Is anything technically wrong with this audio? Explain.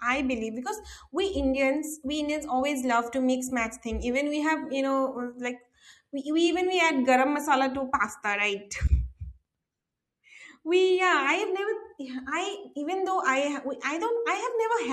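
No, nothing in this speech recording stood out as technically wrong on listening.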